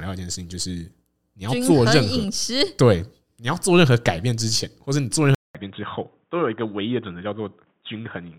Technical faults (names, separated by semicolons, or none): input switched to a poorer device